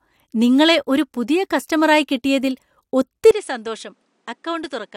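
At 3.31 s the speech abruptly turns duller and about 10 dB quieter, losing everything above 10.7 kHz and gaining a new noise floor about 40 dB down, with no gap. The input likely switched to a poorer device, since tone, level and noise shift together, unlike a simple filter.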